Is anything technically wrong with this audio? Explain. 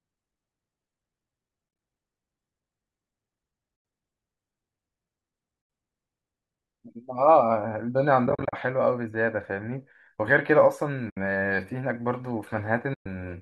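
Yes. AAC frame loss with muting occurs six times: 1.69–1.79 s, 3.76–3.85 s, 5.62–5.70 s, 8.27–8.53 s, 11.10–11.17 s and 12.94–13.06 s. Lost frames were decoded as silence, and the overlapping windows fade the speech out and back in, leaving soft-edged holes of 60 to 160 ms. The gap lengths fit frames of about 10 ms, likely from the low-delay AAC used here. At 1.69 s and 8.27 s the losses are scattered in runs of a few tens of milliseconds, producing a series of brief dips instead of one dropout.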